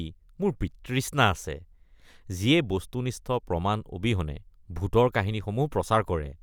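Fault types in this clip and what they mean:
No fault types are present in this clip.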